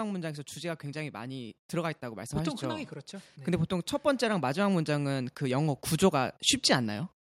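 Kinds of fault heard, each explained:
automatic gain rising: The automatic gain control judged the input too quiet and kept turning it up. From 0.6 s to 7.05 s the level climbs by about 12 dB. The speech and the background noise swell together, slowly, not in a jump.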